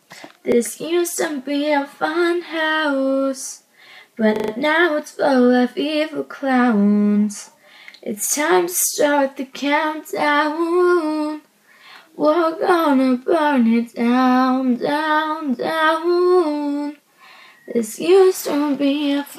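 At 0.52 s a 40 ms piece plays twice, and from 4.36 to 4.52 s another plays five times. This is a repeated buffer: new audio arrived late, so the last block was replayed. It sounds like a stutter, with identical waveform copies and vertical spectrogram lines at each hard join.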